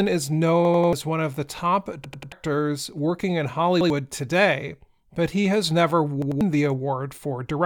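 Repeated buffer stutters at 0.65–0.93 s (before "one of the top"), 2.04–2.32 s, 3.81–3.90 s (after "working in") and 6.22–6.41 s. Each time audio arrived late, so a roughly 93 ms chunk replayed with hard joins, which fits a 4096-sample buffer.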